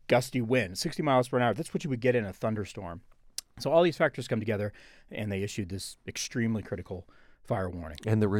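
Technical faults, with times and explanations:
No technical faults can be heard in the clip.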